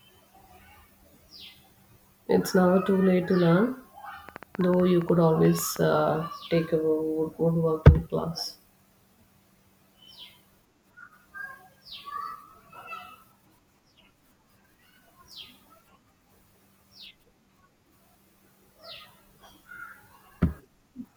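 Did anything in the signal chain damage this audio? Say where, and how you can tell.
Yes. A train of clicks runs from 4.29 to 5.77 s, between "too late to learn" and "uh take a wood": about fifteen similar pulses at roughly 8.1 per second, irregularly spaced, peaking about 5 dB above the speech. This is likely interference picked up in analogue wiring or an intermittent interface.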